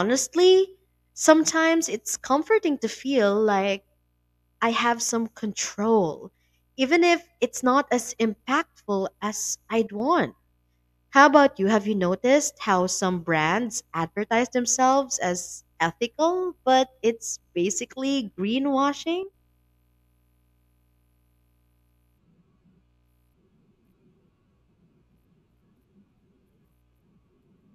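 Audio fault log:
9.87–10.00 s and 19.23–19.34 s, one channel drops out: right after "not as impactful as" and again after "but it's basically greenwashing", the speech abruptly falls by about 6 dB for roughly a tenth of a second (0.13 s, then 0.11 s) before snapping back to full level. The likely cause is one side of a stereo feed briefly going silent, so the mono sum carries only half the shared signal and anything present only in that channel vanishes.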